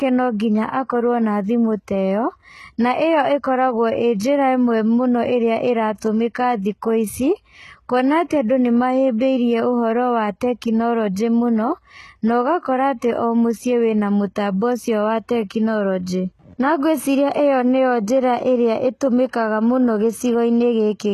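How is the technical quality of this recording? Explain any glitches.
The recording has plainly audible codec damage throughout and two brief glitches.

HE-AAC compression, throughout the 21 s of speech: the treble is probably rebuilt by copying lower bands upward rather than coded directly, so it sounds gritty and lispy on s sounds, with nothing above 12.3 kHz, likely from a low-rate encode around 16 kbps.

Pre-echo, at 6.00 s and from 9.18 to 9.21 s: the codec spread its quantisation noise across each block, so a short hiss arrives just before two sharp attacks, lasting 18 ms and 29 ms, softening and smearing their onsets.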